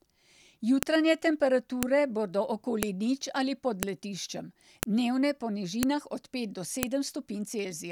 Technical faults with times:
0.83 file header played as audio
1.83 file header played as audio
2.83 file header played as audio
3.83 file header played as audio
4.83 file header played as audio
5.83 file header played as audio
6.83 file header played as audio

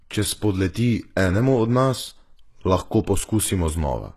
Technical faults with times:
0.00-4.17 HE-AAC compression

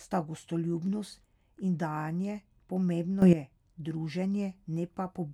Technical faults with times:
3.22-3.33 sudden gain jump

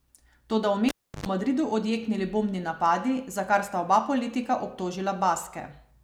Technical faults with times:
0.89-1.26 cable pulled and plugged in

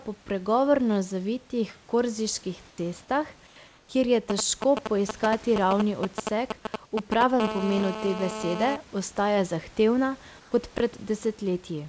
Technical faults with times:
2.69-2.78 comfort noise in place of the background
3.47-3.89 comfort noise in place of the background
4.30-7.23 GSM signalling bursts
7.40-8.76 GSM phone buzz
7.78-7.82 chunks out of order
10.40-10.52 comfort noise in place of the background
10.76-10.80 chunks out of order

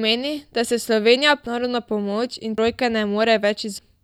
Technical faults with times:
1.46 compressed frames skipped
2.58 compressed frames skipped
3.79 compressed frames skipped

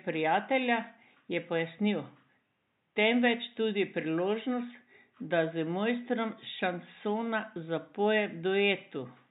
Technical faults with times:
none

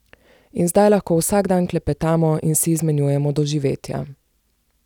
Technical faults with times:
none

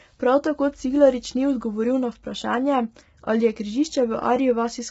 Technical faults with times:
0.00-4.91 low-delay AAC compression

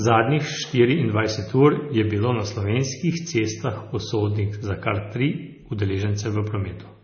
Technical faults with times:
0.00-7.04 MP3 compression

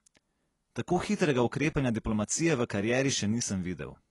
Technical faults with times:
0.00-4.11 AAC compression

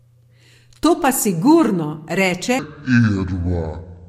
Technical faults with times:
2.59-4.08 section at the wrong speed

